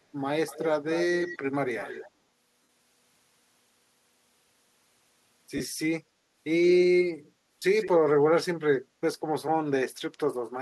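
Echo leak from 0.48 to 0.66 s, 0.86 to 1.38 s and 1.67 to 2.11 s: a faint delayed copy of the speech trails the original by about 215 ms, about 15 dB down in the first two stretches and about 20 dB down in the third. This is likely a far-end loudspeaker whose echo canceller left part of the microphone pickup in place, so the residue returns as a ghostly repeat.

Lost LE Audio frames at 2.63 to 2.69 s (60 ms), 5.57 to 5.60 s (30 ms) and 7.60 to 7.62 s (22.5 ms): these gap lengths point to runs of 7.5 ms Bluetooth LE Audio frames going missing. The LC3 decoder fills each gap by repeating the last spectrum with scrambled signs. The speech briefly turns into a noisy, hissy smear, and the 60 ms gap fades toward silence before the signal returns.

Echo leak again at 7.79 to 7.89 s: a short delayed copy about 15 dB down, this time arriving after about 164 ms, likely slipping past the canceller as a brief repeat.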